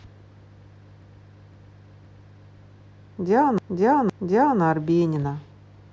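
From 1.02 to 2.56 s, a half-second stretch of speech plays four times in a row, and from 3.58 to 4.61 s another plays three times, each repeat starting with a hard join. This is a repeated buffer: new audio arrived late, so the last 512 ms block was played again. Nothing seems to be skipped afterwards.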